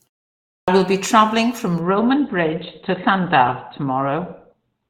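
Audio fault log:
0.59–0.68 s, clipped start after a pause: The sound returns after 0.59 s of silence, but its first 87 ms are missing. It begins abruptly, with no onset. The output device had gone idle in the silence and needed time to wake and lock onto the stream again. Anything sent during that wake-up was dropped, so the start of the phrase is swallowed.
1.81 s to the end, adaptive stream at a lower bitrate: Quality changes suddenly at 1.81 s, with no gap. Codec artefacts rise from there on. The stream has switched to a lower-bitrate rendition because the connection slowed. The sound suggests a step down from roughly 64 kbit/s to 12 kbit/s Opus. At that rate the encoder discards high-frequency detail and approximates the rest.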